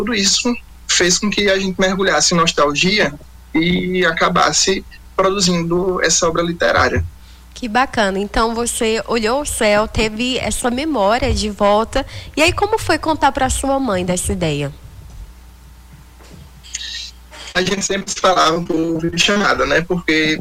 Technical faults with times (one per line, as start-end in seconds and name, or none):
17.51-19.45 repeated packet loss (robotic sound)